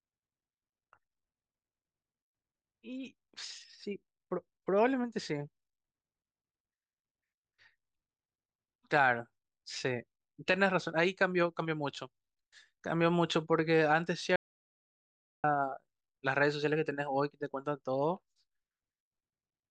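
A speech recording in which the input signal was cut off partway through, most likely a device disconnect, failed link or accidental mute while the recorder kept writing silence. The result is an audio dropout to silence from 14.36 to 15.44 s: the speech stops abruptly, about 1.08 s of silence follows with no room tone underneath, and the speech resumes mid-flow, with whatever was said in that gap lost.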